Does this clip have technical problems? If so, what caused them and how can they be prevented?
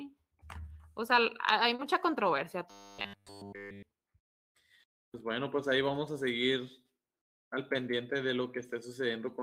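Yes, there are two problems.

At 1.75 to 1.81 s, just after "sea hay", there is short concealed packet loss. About 40 ms of audio never arrived in time. The receiver covered 33 ms of the gap by extending the preceding sound, then faded back into the real signal. You hear a brief smear at that point. A larger jitter buffer, forward error correction or a steadier network connection would prevent it.

From 2.71 to 3.83 s, the sound turns into a rigid, metallic buzz at 100 Hz, through essentially the whole stretch. This is likely robotic sound from repeated short buffers. New audio arrived too seldom, so the software kept replaying a 10 ms slice. That fixed repeat rate stamps the 100 Hz pitch onto the sound, while the real audio in between is lost. Giving the audio thread higher priority and using larger, steadier buffers would prevent it.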